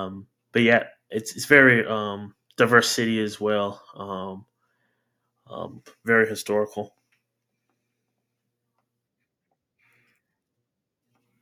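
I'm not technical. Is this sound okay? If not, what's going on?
Yes, nothing in this recording points to a technical problem.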